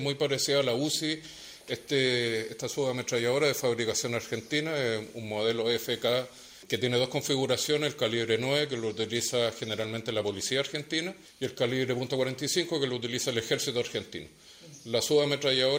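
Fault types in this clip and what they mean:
No fault types can be heard in this clip.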